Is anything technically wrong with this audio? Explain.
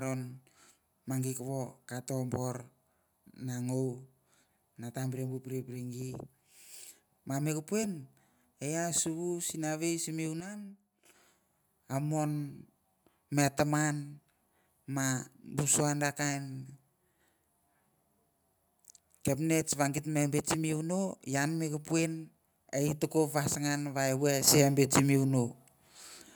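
Yes. Two sudden gain jumps are audible in this speech clip. At 10.40 s the level drops by about 9 dB and stays down until 11.05 s, and at 24.47 s it rises by about 7 dB and holds to the end. Each step happens instantly, with speech and background noise shifting together, which likely points to a digital gain change applied between adjacent samples without a ramp, rather than a change at the source.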